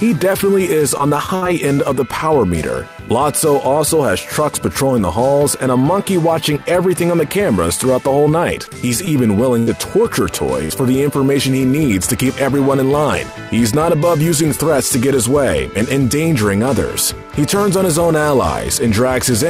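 From 0.97 to 1.47 s, and again from 8.65 to 9.11 s, the sound turns choppy and robotic. This is repeated packet loss: short holes, the longest 59 ms in the first stretch, are patched by stretching the last sound.

Between 9.59 and 9.69 s, and between 10.65 and 10.72 s, a brief held buzz or fading hiss marks a burst of packet loss. The receiver continued the last sound while fading it down, then resumed further on, skipping 80 ms and 40 ms of audio respectively.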